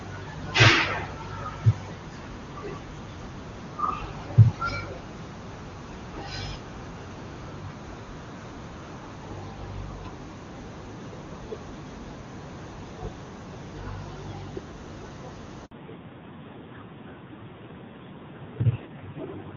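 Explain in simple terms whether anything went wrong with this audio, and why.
Handover gap at 15.65 s: the phone passed the call from one network to another, and for about 60 ms no speech arrived while the switch happened. The sound cuts out abruptly and goes silent for that brief moment, then picks up again once the new connection is running. Whatever was said during that sliver of time is simply gone, because it never reached the other end.

Fallback to narrowband from 15.71 s to the end: right after the switch, the call lost its HD Voice quality, which up to that point had been clear and full, and dropped to an older, lower-quality phone codec. From here on nothing above 4 kHz gets through, so the crisp, airy parts of the speech disappear. The voice sounds duller, more muffled and somewhat rough, like an old-style phone line.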